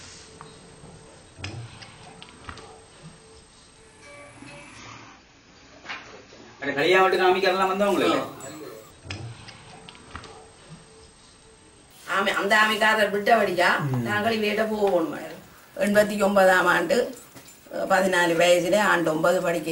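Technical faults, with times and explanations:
4.78 to 6.78 s, adaptive stream at a lower bitrate: the stream briefly fell back to a much leaner encoding, consistent with a drop from around 96 to 24 kbit/s AAC, so for two seconds nothing sounds above 7 kHz and codec artefacts thicken, switching in and out abruptly without any gap.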